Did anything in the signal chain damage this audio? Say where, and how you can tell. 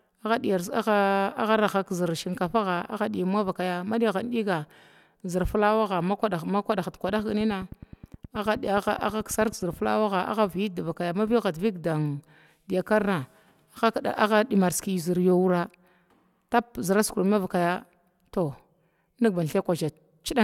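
Yes. A train of clicks runs from 7.09 to 9.85 s. Some thirty even clicks repeat regularly at 9.44 per second, about as loud as the speech and audible in pauses. The likely source is interference from nearby equipment in the analogue wiring or interface.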